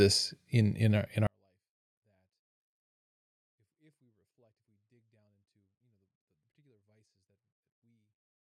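At 1.27 s the speech drops about 48 dB and stays nearly inaudible: a 24-bit alignment error, low-byte 24-bit samples read as full 32-bit integers.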